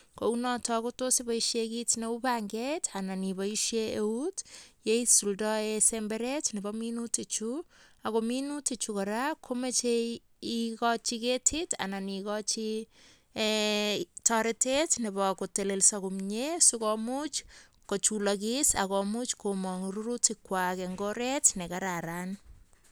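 A speech recording, with nothing technically wrong in it.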